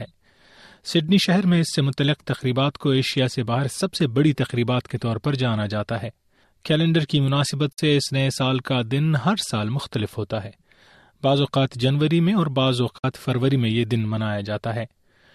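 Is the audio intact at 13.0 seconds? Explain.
No. A digital broadcast dropout from 12.98 to 13.04 s mutes the speech after an 8 ms fade, consistent with about two failed frames; that 48 ms of programme is lost.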